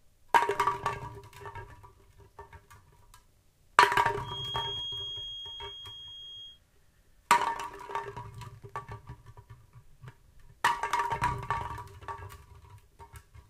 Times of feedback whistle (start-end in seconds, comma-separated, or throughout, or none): 4.19-6.61